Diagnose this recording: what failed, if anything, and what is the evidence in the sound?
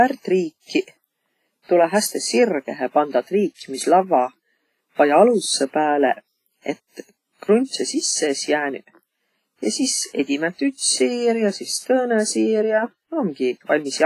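The codec stage is at fault: throughout the speech there is ringing, washy smearing and a hiss that swells and fades with the signal, with nothing above about 15.4 kHz. This is likely WMA compression, and the heavy damage fits a low bitrate around 24 kbps, where coarse long-block quantisation smears noise and drops weak components.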